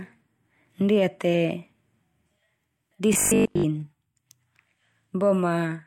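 From 3.14 to 3.66 s the speech becomes a rigid, metallic 50 Hz buzz: robotic sound from repeated short buffers, likely from a roughly 20 ms buffer looping while most new audio was skipped.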